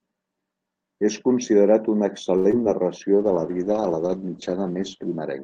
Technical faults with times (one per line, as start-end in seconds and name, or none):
2.37-2.47 short stall from a late packet
2.51-2.67 short concealed packet loss
3.20-5.43 call bitrate drop